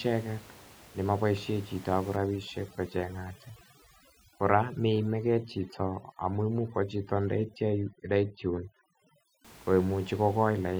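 From 2.16 to 9.45 s, overdone noise removal cuts frequency bands near the room-noise estimate too hard, leaving twinkling near-silence.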